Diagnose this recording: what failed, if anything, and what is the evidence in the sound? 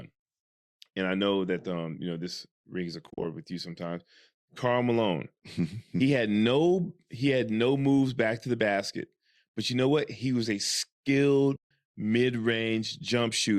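Frames were lost in transmission and the AAC decoder muted them, zeroing their spectrum (AAC frame loss with muting). The overlapping windows fade the speech out and back in, leaving soft-edged holes. Between "know this rings a" and "with you sometimes", 110 ms drops out in patches of up to roughly 40 ms, spread over 3.07 to 3.25 s. A 150 ms gap follows at 11.56 to 11.69 s. The low-delay AAC compression underneath, likely AAC-ELD at 64 kbps, adds only light codec roughness.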